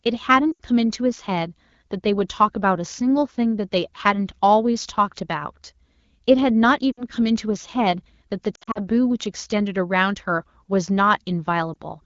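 Brief warbles and smeared dropouts break the speech at 0.52 to 0.60 s, 6.92 to 7.04 s, 8.55 to 8.81 s (several short gaps, the longest about 60 ms) and 11.73 to 11.77 s. These are lost AMR speech frames: corrupted frames failed their checksum, so the wideband decoder repeated the last good pitch and vocal-tract settings at falling gain, with light coding texture throughout.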